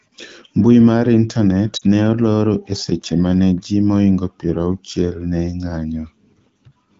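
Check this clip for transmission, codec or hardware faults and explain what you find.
One transmission fault is audible: lost AMR speech frames from 1.77 to 1.84 s. The decoder conceals the 40 ms gap, which fits two dropped 20 ms frames, by repeating the last good pitch and vocal tract settings at falling gain. The result is a brief dip toward near silence before speech resumes rough for a moment. The wideband AMR-WB coding, consistent with the 12.65 kbit/s mode, keeps speech clear around the dropout.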